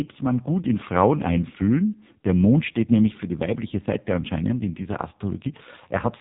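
From start to finish the speech passes through an AMR narrowband mobile codec, with heavy damage. Nothing above 3.8 kHz survives, and the voice turns buzzy and synthetic because a vocal-tract model driven by sparse pulses replaces the real waveform. That thin, robotic edge points to a low mode, which fits roughly 5.9 kbps. A plain telephone-band filter would only dull the sound, and this coder also rebuilds it artificially.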